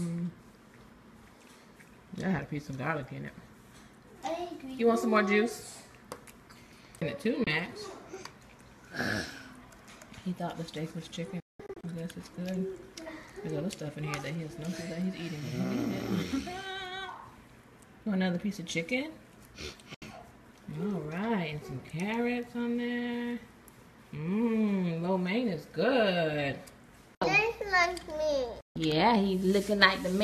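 The audio cuts to silence four times, each with a quick fade: at 7.44–7.47 s, in broken holes across 11.40–11.84 s, at 19.94–20.02 s, and at 28.61–28.76 s. This is digital broadcast dropout. The receiver muted corrupted frames, and the gaps fit 24 ms frames.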